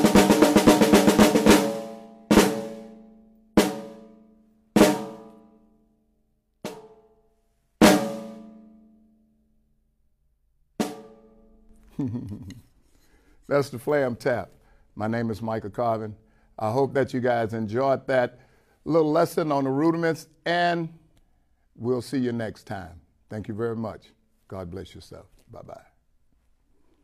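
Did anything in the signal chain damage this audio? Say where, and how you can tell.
No, nothing in the signal chain damaged this audio.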